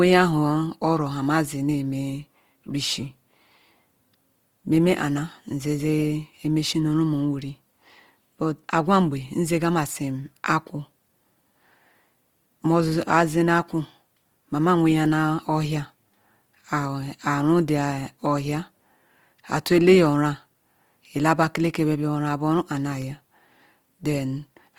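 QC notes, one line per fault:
throughout: Opus compression. Speech sounds grainy and rough, with noise-filled texture up to 20.2 kHz. Likely Opus music mode at a bitrate near 24 kbps.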